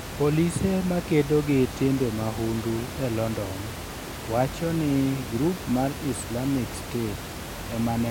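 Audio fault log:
The speech signal comes through intact, with the room's own background noise sitting about 10 dB below it as part of the original recording.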